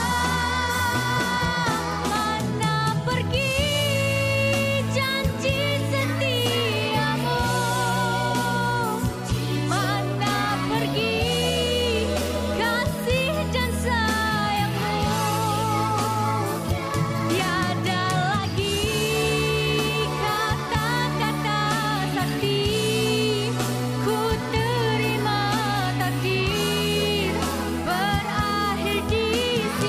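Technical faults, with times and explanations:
No technical faults can be heard anywhere in this recording, and the signal holds steady with no dropouts, distortion or glitches at any point.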